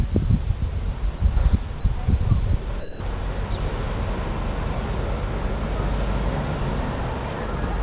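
Audio passed through a narrowband call path with nothing above 4 kHz, which fits a G.711 mu-law codec. At 1.18–1.20 s, 1.80–1.84 s and 2.80–3.00 s, short stretches give way to flat, steady comfort noise, likely sound dropped by the voice detector. This is not packet loss concealment, which would smear or repeat the audio rather than substitute featureless noise.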